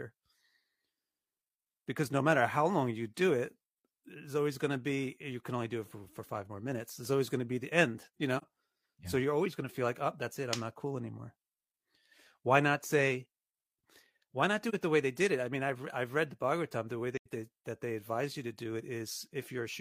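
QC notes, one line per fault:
8.37–8.43 s, 14.69–14.74 s, 17.17–17.27 s: AAC frame loss with muting. The speech drops out briefly. The decoder zeroed the missing spectra: about 43 ms at the first two, which fits a single frame, and about 85 ms at the third. Overlapping windows taper the edges, so the waveform fades to silence and back, and the spectrogram shows full-band vertical gaps with soft edges.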